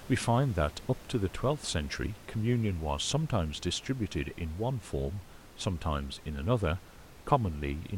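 No technical faults can be heard in this recording.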